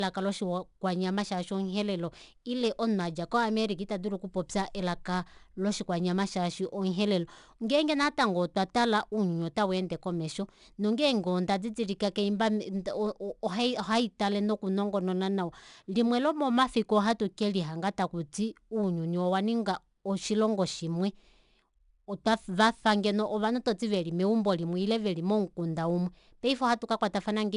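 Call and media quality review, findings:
4-bit ADPCM compression, whole clip. Encoder codes each sample as a coarse 4-bit step off a prediction, step size adapting behind the signal. Result: gritty hiss riding every loud passage, rising and falling with level; smeared, distorted onsets on sharp consonants. Bitrate near 89 kbps. Nothing above 10.6 kHz, so the speech sounds dull, which fits a sample rate around 22 kHz.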